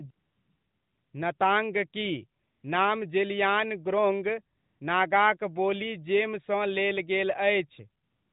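Speech over a narrowband mobile link in which the phone's voice activity detection stopped sending speech frames, so the receiver substituted AMR comfort noise at 0.12–1.14 s, 1.38–1.40 s, 2.44–2.64 s, 4.58–4.80 s and 8.04 s to the end. There the real background drops out for a smooth, steady synthetic hiss that switches abruptly in and out.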